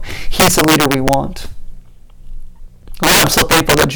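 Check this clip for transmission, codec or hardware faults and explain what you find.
Integer overflow corrupts the speech from 0.40 to 1.14 s (overdriven by about 10 dB) and from 3.03 s to the end at 3.95 s (about 13 dB). Gain pushed the samples past the integer limit, so instead of clamping, each loud peak wrapped to the opposite sign. The result is violent cracks, harsher than clipping. On a waveform, the peaks jump abruptly from one rail to the other. A spectrogram shows bright full-band vertical streaks at each wrap.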